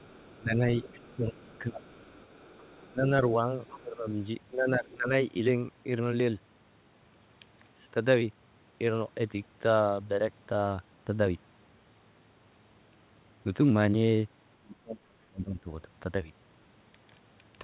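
From 0 to 2.92 s a faint second voice sits under the speech, about 30 dB down. This is the other side's voice leaking through. It is likely loudspeaker echo that the echo canceller failed to remove. Between 0.38 and 1.82 s the speech dips by up to about 20 dB, for around a second in total. This is speech suppressed in double talk. Both sides likely spoke at once, and the canceller turned everything down. It happens again from 2.91 to 5.11 s, with dips of about 15 dB. From 3.67 to 3.77 s a short scrap of the far voice breaks through, about 20 dB below the speech. From 14.6 to 15.69 s the speech drops hardest, by about 35 dB.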